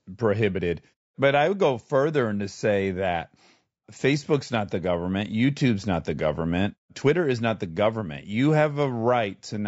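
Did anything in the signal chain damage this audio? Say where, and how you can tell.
Yes: throughout, the speech sounds rough and grainy, with noise filling between harmonics, likely low-delay AAC compression at the codec, its short frames starving harmonics at around 32 kbps.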